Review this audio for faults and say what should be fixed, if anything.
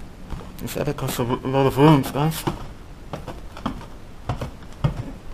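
Periodic clock jitter runs throughout: interference near 2 kHz wobbles the converter clock, adding sidebands around each component that give a rough, metallic edge, strongest on high content. Shield and filter the clock supply, and use a clean, isolated clock source.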